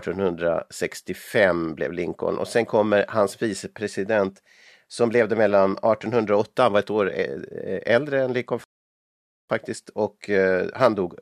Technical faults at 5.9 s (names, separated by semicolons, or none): none